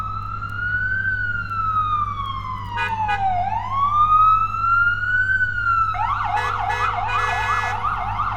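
Mains hum runs under the whole recording, from start to finish. It is a steady low tone at 50 Hz. It sits only about 15 dB below the wanted sound. The cause is power-line coupling. A ground loop or a nearby transformer has leaked the mains frequency into the signal path. The tone does not change or fade. It drones on evenly beneath everything else.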